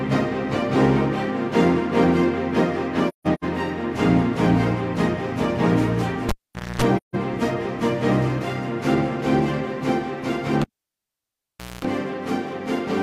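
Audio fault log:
3.08–3.44 s, AAC frame loss with muting: a cluster of dropouts spread across about 0.34 s, with about 0.26 s of audio missing in total and the longest gap around 0.15 s. The decoder zeroed the spectrum of the missing frames, and the overlapping windows taper the sound down and back up, so the holes have soft edges. On a spectrogram these show as short full-band blank columns with feathered sides. The waveform envelope dips smoothly to nothing.
6.29–6.82 s, cable pulled and plugged in: a pop as the live lead comes out, then about 0.48 s disconnected. That stretch holds near silence and a burst of 60 Hz mains buzz lasting about 0.25 s while only the tip touches, and a second pop comes as the signal returns. The waveform shows sharp single spikes at each end. The spectrogram shows vertical broadband streaks at the pops, with steady horizontal lines at 60 Hz and its harmonics during the buzz.
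6.97–7.16 s, AAC frame loss with muting: a second, shorter hole of about 0.17 s, faded out and in by the decoder's windowing. It is again gentle-edged, a soft blank gap across all frequencies.
10.62–11.85 s, cable pulled and plugged in: the same sequence on a longer scale, with about 1.18 s unplugged. A pop opens it, then near silence, then about 0.23 s of 60 Hz hum with harmonic stripes on the spectrogram, and a closing pop as contact is restored.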